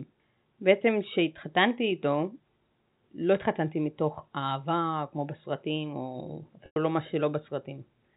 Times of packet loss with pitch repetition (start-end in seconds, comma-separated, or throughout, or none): 6.66-6.76